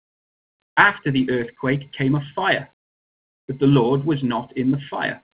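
No technical faults can be heard in this audio.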